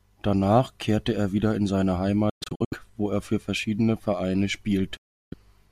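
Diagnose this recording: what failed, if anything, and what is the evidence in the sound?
Playback over the wireless link failed, most likely a Bluetooth dropout. The speech drops into silences scattered between 2.30 and 2.73 s (the longest about 0.12 s) and again from 4.97 to 5.34 s, then resumes further along. On a spectrogram these show as blank vertical bands, and the waveform goes flat where packets missed their deadline.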